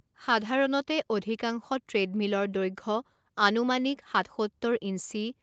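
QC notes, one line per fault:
No faults found; the speech shows normal call microphone processing, with the lowest bass taken out by its high-pass filter and nothing above 8 kHz.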